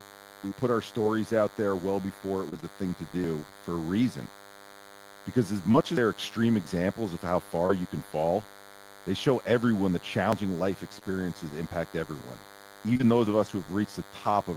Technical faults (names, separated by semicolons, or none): DECT cordless phone buzz; short concealed packet loss; repeated packet loss (robotic sound); dropped buffer (overrun)